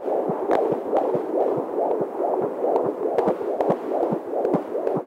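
Nothing here trips the ear as a technical fault; the sound just carries on as it should from the first moment to the last.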